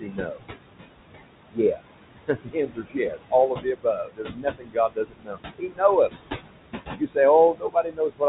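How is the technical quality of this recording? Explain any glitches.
The recording has two audible problems, both from the noise suppressor: residual artifacts throughout, and several places where it removes parts of the speech. The room noise sits only about 9 dB below the speech, so the suppressor works hard. The top end stops at 4 kHz, a narrowband sound that points to a G.711-type call codec.

Noise suppressor artifacts run through the whole clip. The suppressor estimates the steady background in each frequency band and pulls those bands down, here by about 21 dB, recalculating every frame. Because the noise is close in level to the speech, the gain moves constantly. The noise drops away in the gaps and comes back under the voice.

Speech cut by the noise suppressor occurs at 0.0–0.44 s, 1.5–6.1 s, 6.98–7.17 s and from 7.54 s to the end. When quiet speech energy looks too much like the background, the suppressor treats it as noise and attenuates it along with the room sound. 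The deepest drops are about 20, 21, 15 and 22 dB respectively. Within the long 1.5–6.1 s stretch, around two seconds in total are affected. Soft consonants and word endings sound swallowed or faded.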